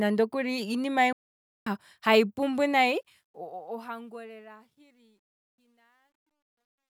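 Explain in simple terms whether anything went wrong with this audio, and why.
At 1.13 s the speech stops dead and stays silent for about half a second, until 1.67 s, then picks up again with "hayi pumbu". This is a playback stall. The likely cause is that the player ran out of audio data, or was held up by something else on the computer, so it had nothing to send to the speakers. Once it caught up, the sound carried on.

From 2.76 s, after "hayi pumbu", to the end of the clip, the sound gets rough and grainy as it fades out. The fade starts around 2.8 s and ends at 6.9 s. From about 4.68 s onward the grit is at its worst. This is truncation distortion on a fade. The volume was turned down digitally using too few levels, which fits a 12-bit stage. Near silence, the wave is left with only a few coarse steps, and that produces the grit instead of a clean taper.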